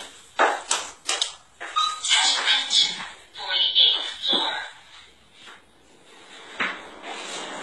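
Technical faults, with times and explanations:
Throughout, transcoding between lossy codecs: nothing above 11.9 kHz survives, and several kinds of coding damage are layered together, artefacts that seem to come from different codecs heard at once. The mix of artefacts points to a chain of roughly HE-AAC, then WMA, then HE-AAC again, likely the result of repeated re-encoding. Each stage spent bits on the previous stage's errors. A spectrogram shows a hard ceiling at 11.9 kHz.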